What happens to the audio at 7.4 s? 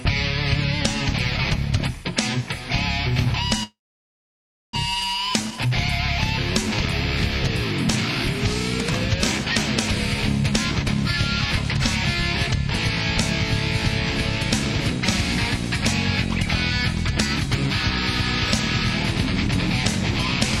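Nothing goes wrong at 7.4 s; the audio plays through that moment intact, with no dropout, click or other fault.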